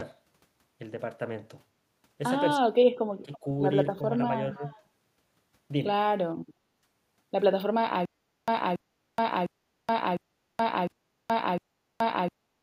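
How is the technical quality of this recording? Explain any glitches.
The recording has three kinds of glitch: speech suppressed in double talk, a brief echo leak, and a stutter with silent gaps that runs to the end.

Speech suppressed in double talk appears from 2.58 to 3.44 s, with smaller dips at 3.96 s and from 4.54 to 4.63 s. The first is heavy, falling by roughly 40 dB and affecting about 0.7 s of sound. The later two are shallow, about 5 and 10 dB. The likely cause is an echo canceller that, while both sides talked, couldn't separate the near talker from loudspeaker echo and turned everything down. This differs from a network dropout: the level is ducked unevenly rather than cut to clean silence.

Echo leak occurs from 3.33 to 3.39 s and from 4.64 to 4.82 s. A faint copy of the sound arrives 333 ms late, about 20 to 25 dB below the main signal. It is likely residue that a far-end echo canceller failed to remove and sent back. 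It differs from room reverberation because it is a distinct, delayed repeat rather than a smooth tail.

Stutter with silent gaps begins at 8.05 s and lasts to the end. A 281 ms burst repeats six times, each followed by about 425 ms of digital silence, giving a steady 705 ms cycle. This points to a likely stalled player that replays its last fragment on each retry. The identical repeats and dead-silent gaps set it apart from packet loss, where the audio varies and the gaps are brief.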